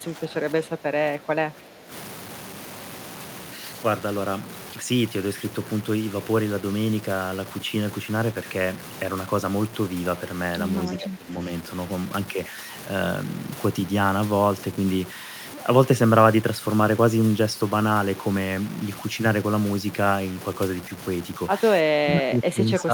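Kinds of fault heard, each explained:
Low bit depth without dither: The speech carries a grainy, gritty edge all the way through that tracks the voice. It sits roughly 20 dB below the talker and roughens the quiet syllables and word endings most. This likely comes from reducing the audio to about 6 bits by simple truncation with no dither. The rounding error then follows the signal as distortion rather than spreading out as steady hiss.
Speech suppressed in double talk: From 0.0 to 1.91 s, at 11.0 to 11.4 s, and from 21.85 s to the end, the voice ducks and thins. The dips are about 10 dB early on, deeper in the middle, and roughly 25 dB at the close. This is likely a call echo canceller that heard both sides talking at once. It could not tell the near talker from the loudspeaker echo, so it pulled everything down.
Echo leak: Near 22.8 s a brief, faint scrap of the voice returns, about 15 dB down. 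It arrives roughly 303 ms after the original sound. This is likely echo from a far-end loudspeaker that the echo canceller failed to fully remove, so a delayed fragment was sent back into the call. Because it lasts only a few hundredths of a second, it registers as a small ghost rather than a clear repeat.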